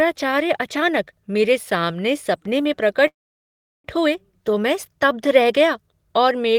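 From 3.07 to 3.87 s, just after "मेरे सामने सपने में", a call audio freeze: the last sound smears into a brief fading buzz or hiss, then about 0.72 s of silence. It likely stems from delayed packets draining the jitter buffer. Playback resumes intact at "हुए तो मैं स्तब्ध", now 0.77 s late.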